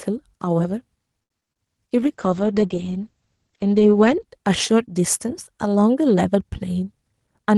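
Speech over a call path, and it has three separate problems. From 1.23 to 1.60 s there's repeated packet loss with that choppy, robotic sound. It has a handful of holes, the longest about 69 ms, each papered over by stretching the previous sound, so roughly a third of that stretch is concealment. Then from 2.02 to 4.30 s a call bitrate drop kicks in. The audio gets coarse and watery, which fits the encoder being cut from around 32 kbps to 10 kbps, and the top end closes in from 12 kHz to 8 kHz, so it turns audibly duller for about two seconds. Right at the end, from 7.04 to 7.55 s, there's a jitter buffer speed-up. The receiver trims pitch-period-sized slices, around 70 ms in total, to drain excess delay, so the sound runs at 111% speed without changing pitch and comes across as rushed.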